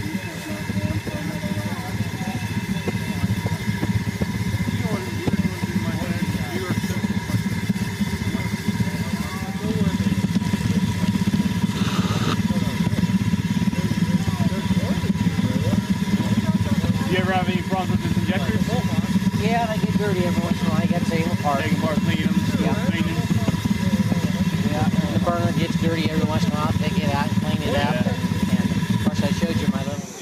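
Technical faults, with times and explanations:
24.12–24.50 s, DAB burbling: for a bit under 0.4 s the audio picks up bubbly, watery blips, the sign of a weak DAB signal letting bit errors slip past error correction into the MP2 data. Corrupted samples throw brief noise bursts into individual sub-bands, and any damaged scale factors make a sub-band jump in level for up to a frame. It fits a bit error rate well under one percent, hitting 19 frames.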